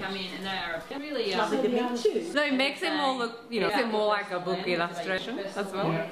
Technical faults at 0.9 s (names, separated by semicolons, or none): compressed frames skipped